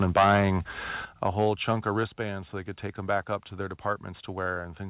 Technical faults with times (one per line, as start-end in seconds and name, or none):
0.02-0.50 microphone overload
1.05 microphone volume stepped down
1.25-1.50 microphone overload
2.07 microphone volume stepped down